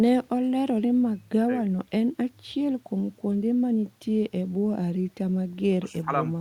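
No technical faults can be heard anywhere in this speech recording. There are no events to place on its timeline.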